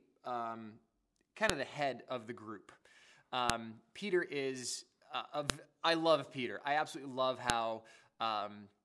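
Sharp clicks at 1.50, 3.50, 5.50 and 7.50 s, every 2 s, are a file header played as audio: header bytes decoded as samples, showing as thin vertical spikes, full-band spectrogram lines.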